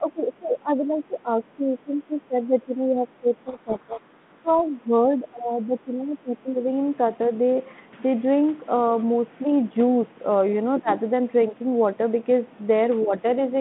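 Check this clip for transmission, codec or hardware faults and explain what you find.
Three kinds of fault turn up across the speech, on a line carried by G.726 ADPCM at 32 kbit/s, with a band of 150 Hz to 3.5 kHz and only light codec grain.

Speech suppressed in double talk runs from 0.0 to 6.65 s, then briefly at 10.79 s and 13.04 s. The likely cause is an echo canceller that could not tell the near talker from loudspeaker echo while both sides spoke, so it turned everything down. The speech dips by up to about 15 dB across roughly five seconds at the start. There is a sharp drop of about 25 dB at 10.79 s and a slight dip of about 5 dB at 13.04 s.

Codec payload misread runs from 3.46 to 4.5 s. The sender and receiver disagreed on the bit order of the G.726 code words. The decoder therefore rebuilt each difference sample from scrambled bits and fed wrong steps into its adaptive predictor. 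The speech there is buried under harsh, grinding distortion for about a second. It clears once the two ends read the bits the same way again.

Other side's voice leaking through appears at 10.92 s and again at 12.49 to 12.64 s. The likely cause is far-end audio from the loudspeaker that the echo canceller left in the microphone signal. At 10.92 s a short scrap of a second voice sits about 15 dB under the main speech, just after the suppression dip. The later stretch is much fainter, at about 35 dB down.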